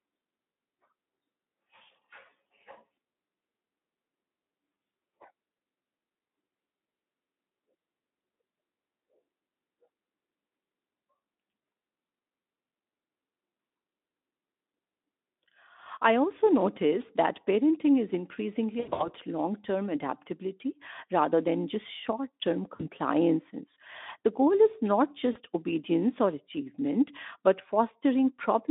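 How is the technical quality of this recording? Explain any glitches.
The recording has audible dropouts in three places. It is narrowband speech, limited to roughly 200 Hz to 3.6 kHz, with light Speex coding consistent with about 15 kbps.

VoIP packet loss concealed by the speech codec occurs at 18.79 to 19.12 s, 22.76 to 22.89 s and 25.31 to 25.37 s. When packets go missing, the decoder extrapolates from its last pitch and filter at falling gain. The first event loses about 160 ms in runs of up to 80 ms, giving a buzzy or noisy smear that fades. The later two lose about 40 ms each and cause briefer blurs.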